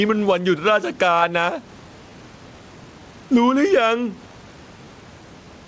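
Speech over a call link, and two things stand out. First, gain pumping: the room noise sits about 35 dB under the talker, and the level swings by around 10 dB. That's likely the input gain set way too hot with a fast limiter clamping it on every peak, so the level gets squashed flat. Second, there's clock drift between sender and receiver, with the sender's clock running roughly 5% slow. The jitter buffer keeps running short, so the receiver pads it out. Those repeated timing corrections run from 0.02 s to 5.66 s as small uneven stretches, playing at about 96% speed and adding something like a third of a second overall. The result is a slightly slowed tempo, with the corrections all leaning the same way, over audio that tops out at 8 kHz from the G.722 path.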